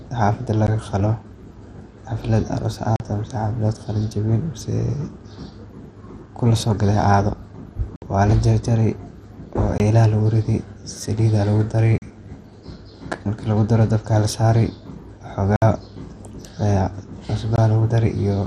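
Right from the start the speech sounds dull, with a gurgling, grainy texture and nothing above 14.2 kHz. That's most likely MP2 compression at a rate around 64 kbps. There aren't enough bits, so the upper sub-bands flicker out and the remaining bands are coarsely quantised.

On top of that there are seven blocks of digital silence, where the sound cuts out to silence with no fade. The first is a short tick at 0.67 s. Then come holes of 40 ms at 2.96 s, 60 ms at 7.96 s, 20 ms at 9.78 s, 40 ms at 11.98 s, 60 ms at 15.56 s and 20 ms at 17.56 s.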